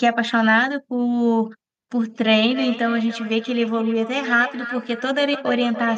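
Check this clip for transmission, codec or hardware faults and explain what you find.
One transmission fault is present. From 2.38 s to the end, there is feedback echo between two devices: the speech returns about every third of a second, peaking at about 12 dB below the speech. It comes from a second device in the same room replaying this microphone's signal, which the microphone picks up again and which this device's echo canceller cannot remove. It differs from room reverberation, which decays smoothly, because this echo arrives as distinct, evenly spaced repeats.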